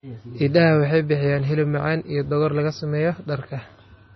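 From start to finish the speech carries heavy damage of the kind MP3 compression leaves, likely from encoding at a low bitrate, which fits something near 24 kbps. Nothing survives above 5.9 kHz, so a spectrogram shows a flat ceiling there, and the region below it looks patchy, with weak components flickering in and out between frames. The result sounds dull, watery and swirling, with s sounds turning metallic and consonant onsets smeared.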